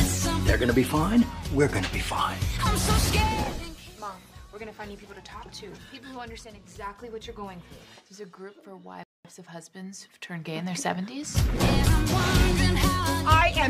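The player's download buffer ran dry at 9.03 s, causing a rebuffering stall: playback halted until fresh data arrived, then carried on from the exact point where it had stopped. To the ear, the audio drops to silence from 9.03 to 9.25 s and picks up with nothing skipped or repeated, so the only damage is about 0.21 s of dead air inserted into the timeline.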